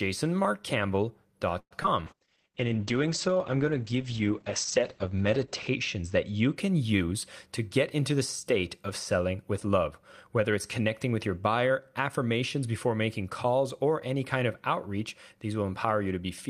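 At 1.59 s the audio stalls until 1.73 s, most likely a call audio freeze in which delayed packets left the jitter buffer empty. The receiver extended the last sound and let it die away, with about 60 ms of silence inside the 113 ms pause. The audio then resumes where it stopped, pushed 113 ms later, with nothing lost.

Just after, around 1.83 to 1.86 s, comes a short concealed packet loss. About 20 ms of the call never reached the decoder in time, so the receiver filled the hole by carrying the previous sound forward and blending back, leaving a brief smear in the speech.

From 2.07 s to 6.62 s there is a call bitrate drop. The bandwidth estimate fell and the Opus encoder went from 32 kbps to 9 kbps, staying at the lowest rate for about 3.6 s. The audio band shrinks from 20 kHz to 8 kHz, so the speech turns coarser and duller until the rate recovers.

From 11.63 s to 12.63 s, between "it's connecting with your" and "before making calls or", a jitter buffer speed-up occurs. 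The buffer was holding more audio than its target, so the receiver cut out short pitch-period pieces, roughly 70 ms in total. The speech runs at about 106% speed with unchanged pitch and sounds hurried.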